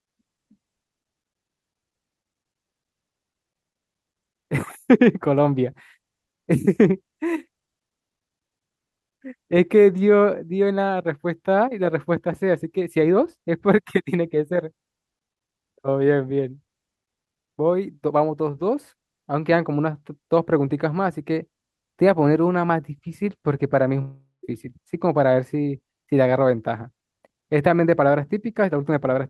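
A long network dropout hits this speech recording from 24.01 to 24.45 s. The last sound smears into a fading buzz, then about 0.15 s of silence, most likely from lost packets that were concealed and never recovered. The call path's coding tops out near 12 kHz, which fits Opus.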